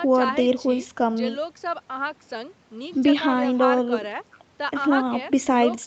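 Speech carried over a call path, with content topping out at 8 kHz as expected from the call microphone processing and a wideband Opus link at a bitrate that sounds like around 48 kbps, and no technical faults audible.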